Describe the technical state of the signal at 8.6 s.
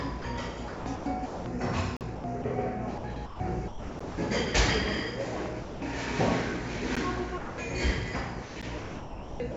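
At 8.6 s the sound turns choppy: from 8.42 s to the end at 9.56 s, stretches of the real sound give way to a flat, synthetic hiss, with roughly 0.8 s of the stretch replaced in total. This is likely sound chopped by the voice detector: the sender's detector kept deciding the quieter moments weren't worth transmitting and switched them off, and the receiver filled the gaps with generated comfort noise. Like everything else carried over the call path, the sound has nothing above 8 kHz.

Inside that stretch, at 8.62 s, there is a sharp tick lasting about 11.6 ms. This is a block of digital silence. The output briefly dropped to silence and came back with no fade. That length fits a 512-sample buffer that wasn't filled in time.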